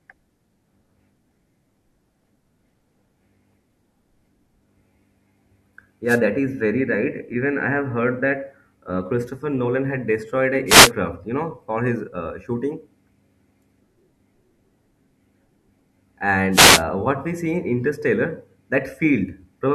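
The radio link from an analogue FM wireless microphone fades three times as reflections cancel, and receiver noise surges into brief swishes of static over the speech. These wireless microphone noise hits occur at 6.06–6.20 s before "that is", at 10.66–10.91 s between "had destroyed an" and "you know for his", and at 16.51–16.83 s before "what we see in".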